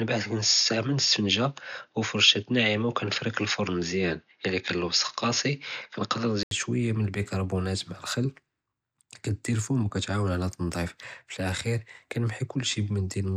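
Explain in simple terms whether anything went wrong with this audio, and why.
The recording likely began on a poorer microphone, a case of input switched to a poorer device, and moved to a better one at about 6.5 s. Until then nothing above 6.8 kHz comes through, so the speech sounds dull and boxy. A short gap of about 80 ms marks the switch.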